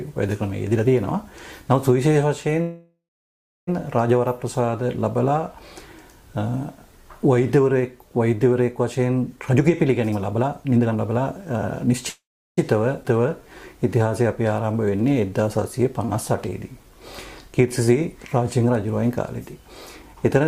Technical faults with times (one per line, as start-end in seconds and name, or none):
2.61-3.69 call audio freeze
9.36-11.94 jitter buffer speed-up
12.09-12.59 call audio freeze
13.03-13.06 skip ahead
13.13-17.86 jitter buffer slow-down
16.05-16.11 short stall from a late packet
20.02-20.41 jitter buffer speed-up